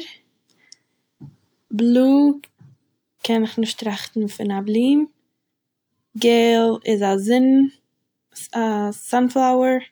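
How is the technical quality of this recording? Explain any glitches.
Nothing glitchy turns up anywhere in this recording, so there's nothing here that needs explaining.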